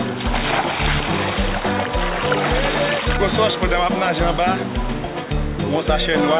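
No technical faults can be heard anywhere in this audio.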